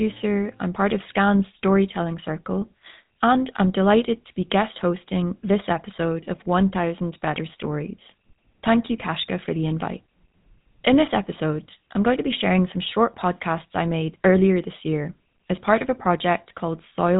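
From start to finish the speech has gone through the GSM full-rate codec, and it's plainly audible. The vocal tract is modelled and excited by evenly spaced pulses, which fits a 13 kbps stream, giving a buzzy, gravelly roughness, with nothing above 3.8 kHz.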